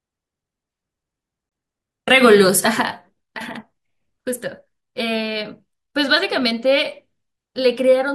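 At 1.49 to 1.52 s the speech drops out for about 24 ms. This is a gap between stream segments: two consecutive segments' timestamps leave a small hole that the player fills with silence. It sounds like a hard-edged dropout, with no audio lost.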